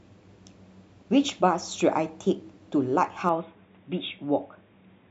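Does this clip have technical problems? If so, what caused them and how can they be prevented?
Yes. From 3.29 s to the end, the speech goes dull and boxy with nothing above 3.8 kHz, drops about 5 dB, and picks up faint new background noise, with no gap. That's likely an input switched to a poorer device. Locking the input device before recording prevents it.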